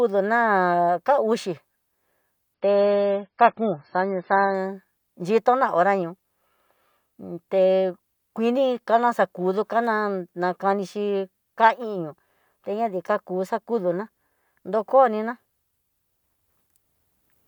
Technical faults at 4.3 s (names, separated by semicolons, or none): adaptive stream at a lower bitrate